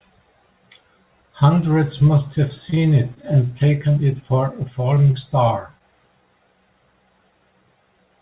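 At 2.70 to 2.74 s a packet arrived late and the jitter buffer ran dry, causing a short stall from a late packet. The receiver held the last sound for about 22 ms until the data caught up, so nothing is lost, but the speech briefly sustains unnaturally with a slight buzz or dip.

Straight after, at 2.74 to 2.78 s, and again at 3.14 to 3.18 s, there is short concealed packet loss. About 20 ms of audio never arrived in time each time, and the decoder bridged the hole by extending the preceding sound. Each patch comes across as a quick smear or wobble in the speech.

From 4.94 to 5.82 s there is repeated packet loss (robotic sound). Data dropped out five times in under a second, with the longest hole about 24 ms and roughly 60 ms missing in all. Repeated patching of about 9% of that stretch leaves the speech choppy. The G.711 mu-law call path underneath passes nothing above 4 kHz.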